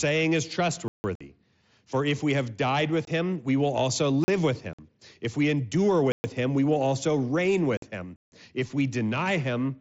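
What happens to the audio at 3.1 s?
From 3.05 to 3.08 s the speech drops into a gap of about 22 ms with hard edges, heard as a brief chop. This is unconcealed Bluetooth headset packet loss: voice packets on the mSBC link never arrived and nothing was patched in, which fits three lost packets of about 7.5 ms each. The waveform shows a flat hole cut straight out of the speech, and the spectrogram shows a thin vertical blank.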